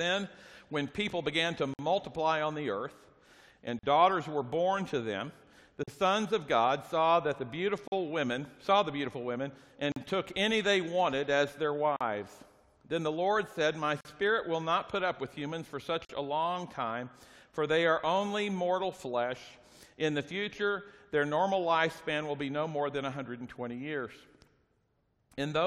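Short silences open at 1.74, 3.79, 5.83, 7.88, 9.92, 11.96, 14.01 and 16.05 s, one every 2.0 s. The first lasts 54 ms and the rest 43 ms each. This is a gap at a join of encoded pieces: each separately encoded chunk kept its encoder start delay and end padding. Unlike a dropout, nothing is lost. The sound resumes exactly where it paused, with softened edges.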